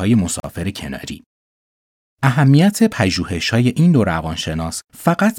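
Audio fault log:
0.40–0.44 s, gap at a join of encoded pieces: the speech drops into a 43.5 ms gap, its edges smeared so the silent part is shorter, and then resumes exactly where it left off, because two separately encoded sections were butted together without removing the encoder's start-up delay and final-frame padding. On a waveform it appears as a flat stretch with edges smeared by the codec. On a spectrogram it is a vertical blank band cutting across every frequency.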